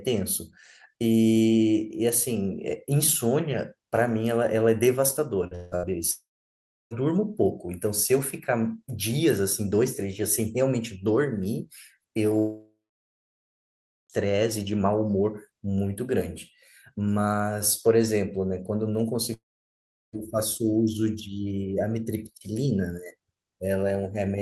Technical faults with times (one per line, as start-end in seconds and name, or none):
5.47-5.54 short concealed packet loss
5.55-5.75 long network dropout
5.76-5.86 burst of packet loss
6.11-6.94 long network dropout
12.39-14.13 long network dropout
19.34-20.16 long network dropout